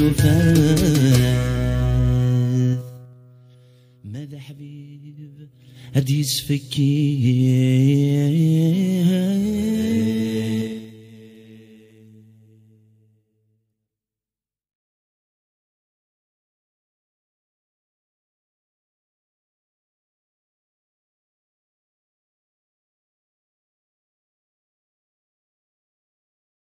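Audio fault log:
2.69–3.16 s, 5.48–5.94 s, 10.59–10.96 s zipper noise: level shifted about 20 dB (down, up, down) in unsmoothed 3 dB jumps, fifteen to twenty a second; each jump clicks, giving a zipping tick.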